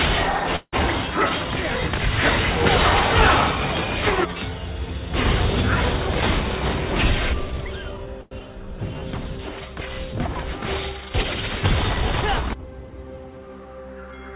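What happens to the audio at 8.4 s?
A call audio freeze at 8.21 to 8.33 s fills about 100 ms with a fading continuation of the preceding sound, likely because delayed packets left the jitter buffer empty. A skip ahead follows at 8.39 to 8.42 s: playback jumps forward over roughly 70 ms of audio, and the two sides join almost directly. Both occur in narrowband audio with nothing above 4 kHz.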